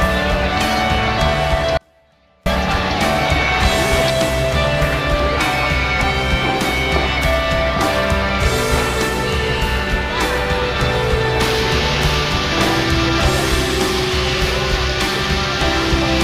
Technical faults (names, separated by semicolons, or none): audio dropout to a faint residue